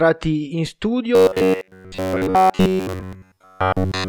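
From 1.15 s to the end at 4.09 s, the speech turns into robotic sound from repeated short buffers, a rigid metallic buzz at 93.8 Hz. This is likely a starved stream looping roughly 10.7 ms chunks, which a waveform shows as identical repeating cycles and a spectrogram as flat, evenly spaced harmonic lines.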